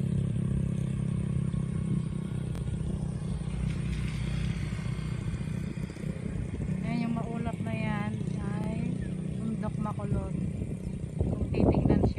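Two repeated-buffer stutters interrupt the sound: at 2.55 to 2.60 s the same piece of about 23 ms plays twice more, and at 8.64 s it plays once more. Each repeat lasts about 23 ms, which fits a 1024-sample buffer replayed when fresh audio arrived late. Little or nothing appears to be lost. On a waveform, identical blocks sit side by side with abrupt steps at each join. A spectrogram shows thin vertical click lines there.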